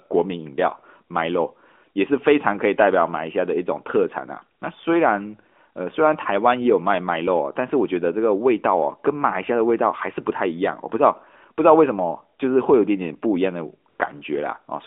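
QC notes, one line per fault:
4.60–4.62 s and 13.90–14.00 s, AMR comfort noise: speech frames stop for 20 ms, then 100 ms, and a smooth, steady synthetic hiss replaces the real background, unlike the dead silence of a dropout.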